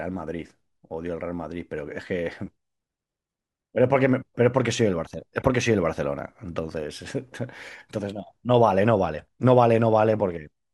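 At 5.40 s the speech is interrupted by a corrupt frame decoded, lasting to about 5.46 s, roughly 64 ms. Damaged bits in a short run of compressed frames, a few at most, were passed to the decoder and played rather than concealed. Misread gains and spectral codes put energy at frequencies unrelated to the speech, producing a brief chirpy burst of noise that peaks around -20 dBFS.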